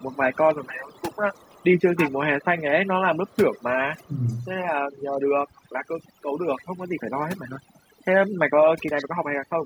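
A noise reduction stage set far too aggressively runs through the whole recording, which points to overdone noise removal. Any frequency band that sits near its noise estimate gets pulled down hard or shut off, taking the quieter parts of the voice along with it. The background collapses into near silence scattered with twinkling specks.

From 0.0 to 2.45 s an echo leak is audible, most likely from a loudspeaker on the far side whose echo canceller let part of its microphone pickup pass back down the line. A copy of the voice trails about 308 ms behind, roughly 20 dB under the speech. Fainter scraps of the same 308 ms echo return at 3.27 to 3.63 s and 3.97 to 4.46 s, both around 35 dB down.

Between 4.06 and 4.33 s, while that leak is present, the speech dips by as much as about 15 dB for roughly 300 ms. This is speech suppressed in double talk, likely caused by the canceller failing to separate the local talker from the returning echo and attenuating both together.

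The echo leak comes back twice more at the same 308 ms delay: briefly at 6.56 to 6.64 s, about 30 dB down, and at 8.96 to 9.05 s, where it is stronger at about 15 dB below the speech.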